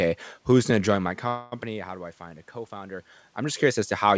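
Right after "going to join my", at 1.28 s, there's a call audio freeze lasting until 1.55 s. The last sound gets stretched into a fading buzzy hiss for about 0.24 s, likely because delayed packets drained the jitter buffer. Then the speech picks up where it stopped, with nothing lost but everything now running late.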